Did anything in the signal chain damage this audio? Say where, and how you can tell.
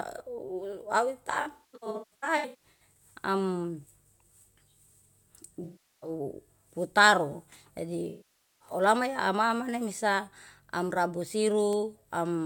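Yes. From 1.31 to 2.81 s the speech turns smeared and phasey in broken patches, with about one second missing across that span and the longest gap around a fifth of a second. Shorter blurred dropouts follow at 5.64 to 6.10 s (384 ms) and 8.09 to 8.68 s (512 ms). This is AAC frame loss with concealment at the codec or network stage: the decoder rebuilt missing frames from the last good spectrum.

At 11.73 s there is a single sharp, full-band tick that has nothing to do with the speech around it. That is a bit error spike: two consecutive samples jumped by a power of two and snapped back, pointing to a corrupted bit in storage or on a digital link.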